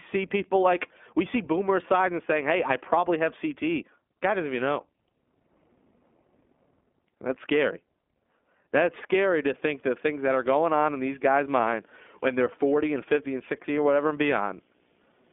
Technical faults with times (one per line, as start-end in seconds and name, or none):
0.00-15.32 iLBC codec
9.67-15.32 video or display buzz